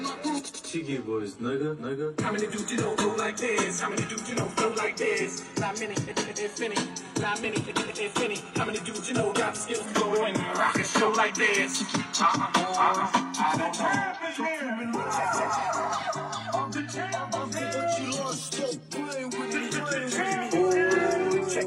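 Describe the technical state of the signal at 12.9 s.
At 12.9 s the signal is intact, with no dropout, distortion, glitch or other fault audible at that moment.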